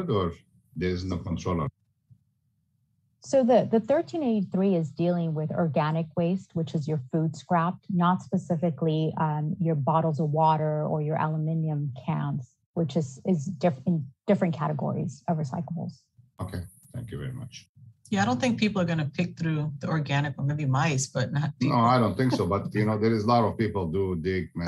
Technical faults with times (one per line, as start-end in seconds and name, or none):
none